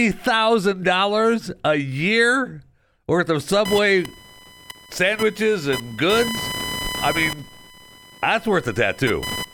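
Speech recording with computer activity noise from 3.65 s, just after "a year worth of", to the end: a buzzy chirping near 1 kHz, about 10 dB below the speech, from processor or graphics load disturbing the shared audio ground. It tracks the computer's activity rather than holding steady like mains hum.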